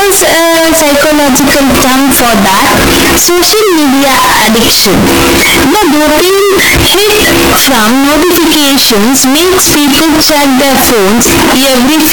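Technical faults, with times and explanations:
Throughout: float read as integer. The speech is extremely loud and harsh for its whole length, with the waveform flattened into a near-square shape sitting at an almost fixed, high level regardless of how quiet the underlying sound was. Background noise comes through at the same level as the speech itself, though the pitch contour remains traceable. The likely cause is 32-bit float samples being interpreted as 32-bit integers, so the sign and exponent bits dominate each value.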